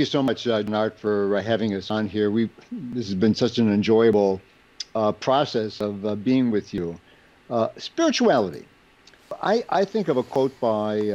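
At 0.28 s the sound breaks, and it jumps forward by roughly 50 ms. This is a dropped buffer (overrun), likely from the program failing to collect a buffer before the hardware overwrote it. There is no gap. The two sides of the loss are joined directly. The same jump returns at 1.07, 1.90, 2.93, 4.13, 5.81, 6.78 and 10.36 s. Each loses a similar short piece.

At 0.68 s the sound leaps ahead by about 300 ms. These are compressed frames skipped. About three frames of 92.9 ms each were never played. At 9.31 s it happens again, with about two frames lost and roughly 200 ms missing.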